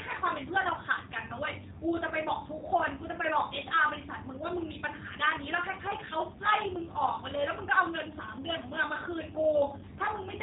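From start to finish, the speech carries G.729 codec damage. The codec rebuilds speech from a vocal tract model and a few pulses per frame, which fits an 8 kbit/s stream. Nothing above 3.8 kHz survives. The voice sounds plainly rough, thin and synthetic.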